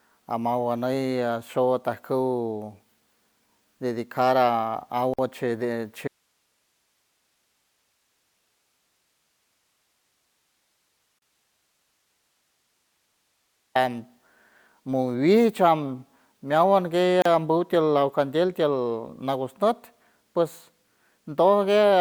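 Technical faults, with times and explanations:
5.14 s, 11.19 s and 17.22 s: gap at a join of encoded pieces. Silences of 49.6 ms, then 34.3 ms and 34.3 ms, cut into the continuous sound at a steady 6 s spacing. Separately encoded segments were joined without trimming the encoder's leading delay and final-frame padding, so brief holes with smeared edges appear.
6.08 to 13.75 s: audio dropout to a faint residue. The speech stops abruptly and stays gone for 7.64 s, leaving only hiss roughly 50 dB below the normal signal level before cutting back in. The likely cause is a lost source while the downstream path stayed live, passing only its own noise.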